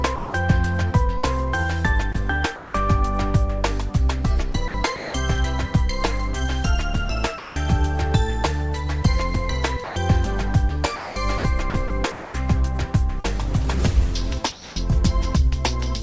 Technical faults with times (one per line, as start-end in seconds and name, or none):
0.16-0.34 sound dropped by the voice detector
1.18-2.74 sound chopped by the voice detector
4.52-5.14 sound chopped by the voice detector
7.38-7.56 sound dropped by the voice detector
9.84-9.96 sound dropped by the voice detector
10.96-12.34 sound chopped by the voice detector
13.20-13.26 short concealed packet loss
14.52-14.76 comfort noise in place of the background